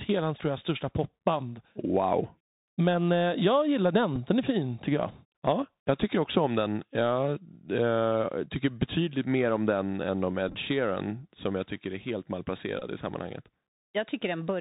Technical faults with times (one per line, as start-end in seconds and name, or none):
0.00-14.61 Bluetooth CVSD headset codec
4.16 Bluetooth headset packet repeated
10.48-10.55 Bluetooth headset packet repeated
12.79-12.83 Bluetooth headset packet repeated